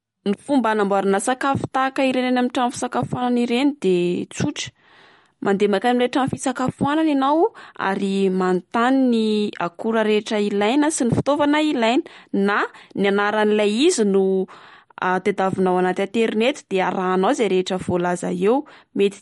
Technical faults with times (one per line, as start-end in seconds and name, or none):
0.00-19.21 MP3 compression